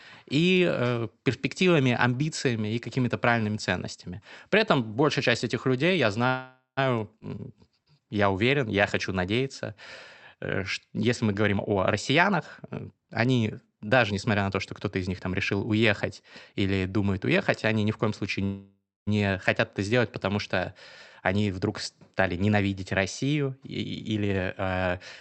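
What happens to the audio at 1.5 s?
Nothing goes wrong at 1.5 s: the speech there passes intact through the call path.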